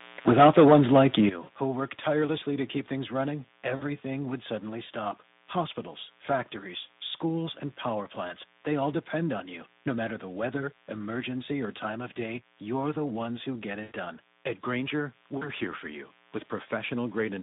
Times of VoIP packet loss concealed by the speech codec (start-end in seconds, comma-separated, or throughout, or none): 1.43-1.49, 3.75-3.83, 13.83-13.93, 15.37-15.49